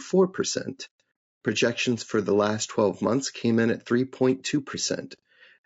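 From start to end the speech sounds rough and grainy, with noise between harmonics, which points to low-delay AAC compression at around 32 kbps, likely AAC-ELD.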